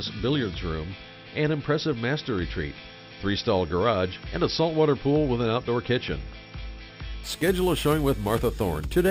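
The audio picks up a bright, metallic fizz from 7.24 s to the end at 9.10 s. This is imaging from sample-and-hold upsampling. Each sample was repeated to raise the rate, with no smoothing filter afterwards. Mirror copies of the spectrum leak in, the lowest folding between 6 kHz and 12 kHz. That fits an original rate of 12 kHz. The fizz sits about 19 dB below the signal and rises and falls with it.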